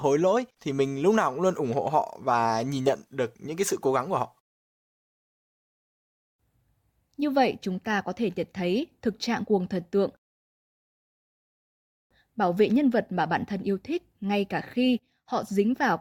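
Speech goes abruptly silent after "cố gắng của họ" (4.51–6.17 s) and after "trạng cuồng thần tượng" (10.17–12.11 s), resuming intact at "bảo vệ nhân vật". These are rebuffering stalls: playback ran dry, adding about 1.65 s and 1.94 s.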